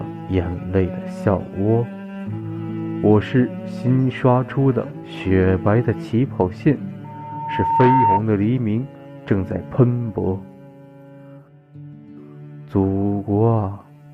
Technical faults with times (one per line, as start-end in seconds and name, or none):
7.04-8.22 loudspeaker feedback squeal